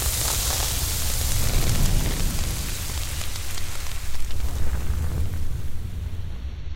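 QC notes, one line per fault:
Nothing to flag here, this one's all good and there's no fault to note anywhere in the audio.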